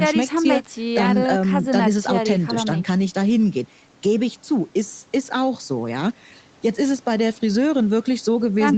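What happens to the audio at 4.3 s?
At 4.3 s the speech runs on intact, with no dropout, glitch or distortion, just the normal call-path sound with nothing above 8 kHz.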